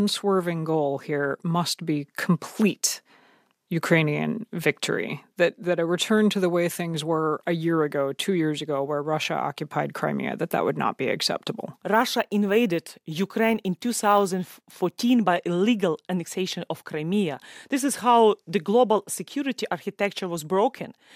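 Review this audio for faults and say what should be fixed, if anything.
Crude rate conversion is audible from 11.94 to 15.14 s. Through that span the speech picks up a gritty, inharmonic fizz that tracks the louder and brighter sounds. The pattern fits a 3:2 step, as from 32 kHz to 48 kHz, done by repeating the nearest sample instead of filtering. That regular stepping creates tones unrelated to the speech, sitting only around 25 dB below it. To prevent it, resample with a properly band-limited converter.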